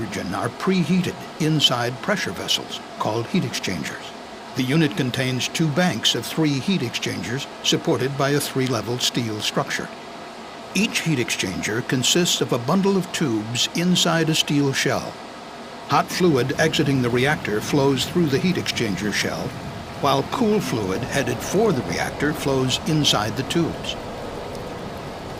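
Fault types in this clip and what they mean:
No fault types are present in this clip, so there is nothing to list or explain.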